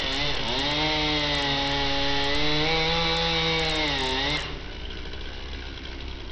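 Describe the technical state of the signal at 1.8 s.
Bluetooth SBC compression is at work at 1.8 s, as it is across the entire clip, and this is likely the cause of what is heard. The codec splits the signal into a few wide sub-bands and shares very few bits among them, so the top bands are starved and the rest are coarsely quantised. Nothing remains above about 8.7 kHz, and a gritty, aliased roughness sits on the sound, damage heavy enough to fit a rate near 64 kbps.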